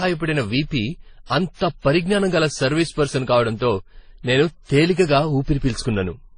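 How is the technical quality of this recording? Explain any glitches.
The technical quality is poor throughout the speech. It sounds dull and smeared, with nothing above 9.7 kHz, and a mix of swirly, watery and gritty artefacts layered together. The likely cause is transcoding between lossy codecs, a chain ending in AAC-LC that sounds like low-bitrate WMA and MP3 stages. Each pass wasted bits re-encoding earlier damage, added its own, and the lowest cut-off stayed.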